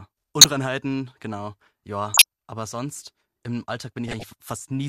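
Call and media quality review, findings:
Corrupt frame decoded, speech, three bursts: 0.41–0.48 s (a few frames), 2.07–2.24 s and 4.07–4.23 s (several frames each). Short chirp-and-noise blips reaching near full scale in the first two, well below in the last. Probable component: decoder fed bit-damaged frames. Misread gains and codes misplace spectral energy. Unlike packet-loss concealment, which smears or repeats prior sound, these inject foreign tonal or noisy energy that was never in the signal.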